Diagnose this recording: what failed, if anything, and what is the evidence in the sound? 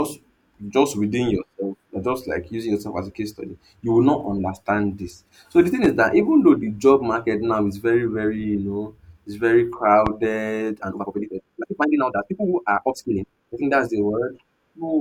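Loud pops at 5.84–5.88 s, after "the thing", and 10.07–10.10 s, after "know it's very": single sharp pops, about 10 and 15 dB above the speech. These are likely voltage pulses entering the analogue wiring.

Time-stretched section from 10.59 to 13.57 s: the speech rushes at 1.88 times normal pace with unchanged pitch, likely from software dropping short pieces to shorten it.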